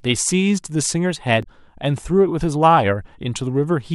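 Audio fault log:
1.40–1.46 s, damaged data in a compressed stream: A short glitch cuts through the speech for about 60 ms. Part of the encoded stream here is corrupt, so the decoder cannot read those frames properly. It plays garbage for a moment, loses its place, then hunts for the next valid frame header. That brief misread gives the audible blip. Once it resyncs on a later frame, normal playback resumes.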